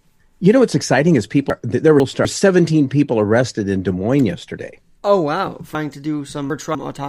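Chunks out of order, twice: a 250 ms chunk was delivered late and played after the chunks meant to follow it, two chunks late from 1.5 to 2.25 s, three late from 5.75 to 6.75 s. Nothing drops out, but each stretch sounds jumbled, with three hard joins.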